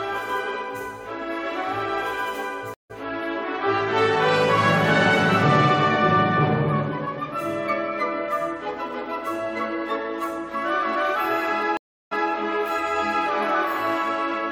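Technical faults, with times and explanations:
2.74–2.91 s and 11.77–12.30 s, stream reconnect. The connection dropped, the player went silent, then rejoined with a fresh decoder mid-stream. At 2.74 s the gap lasts 157 ms, and the audio comes back roughly 150 ms further on, so a short stretch is skipped. At 11.77 s the gap is 341 ms, and playback resumes 192 ms earlier, so a brief passage repeats, as when a server resends a burst.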